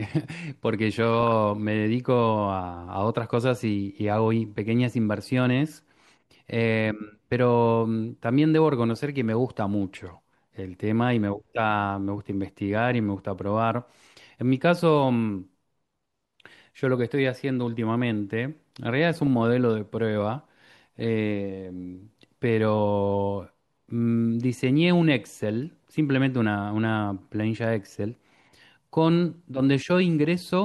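Six short bursts of DAB burbling turn up in this speech clip: 1.13–1.32 s, 5.70–6.15 s, 8.90–9.09 s, 19.15–19.27 s, 20.99–21.04 s and 25.72–25.94 s. Weak reception let a fraction of a percent of bit errors slip past error correction into the MP2 stream. Corrupted samples put short blips of noise in single sub-bands, and corrupted scale factors make sub-bands jump in level for up to a frame, giving a burbling over the voice.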